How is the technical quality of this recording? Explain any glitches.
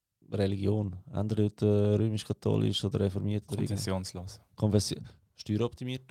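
Nothing in this speech recording stands out as a glitch, so there's really nothing here to explain.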